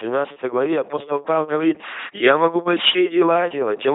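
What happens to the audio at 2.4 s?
LPC-10 vocoder damage is present at 2.4 s, as it is across the whole clip rather than as a single event. The speech is rebuilt from a short all-pole filter model of the vocal tract, excited by either a buzzy pulse train or noise, with each moment forced to be fully voiced or fully unvoiced. The result is a heavy, mechanical robot voice with nothing above 3.8 kHz, which fits a 2.4 kbit/s LPC-10 coder.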